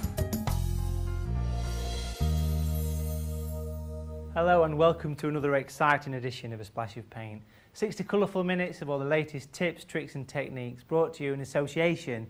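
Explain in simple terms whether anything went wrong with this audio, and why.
Two things went wrong, both near the start.

At 1.25 s there is a skip ahead: roughly the next 0.7 seconds of sound never plays, and playback jumps straight to what comes after. The two sides are joined almost seamlessly, with no silence in between. That is what sets it apart from a dropout, which leaves an audible gap or hole. Here you hear a sudden jump, as if a moment of the recording had been cut out and the ends spliced together.

From 1.38 s to 2.30 s comes a jitter buffer speed-up. The receiving end had built up too much waiting audio and trimmed many tiny slices out of it, about a twentieth of a second in total, to catch up. The sound runs about 5% faster and can feel slightly hurried. Unlike a simple fast-forward or tape speed change, the pitch stays the same, because only timing is removed and nothing is raised or squeezed in tone.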